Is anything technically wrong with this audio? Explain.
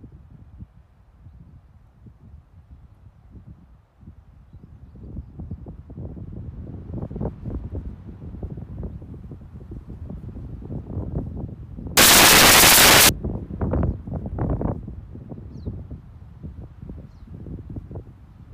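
Yes. From 11.97 to 13.09 s the samples are built from the wrong bytes. The reader assembles each sample misaligned or byte-swapped, so the jittery low bits end up driving the value. What you get is a burst of loud, harsh broadband noise for about a second.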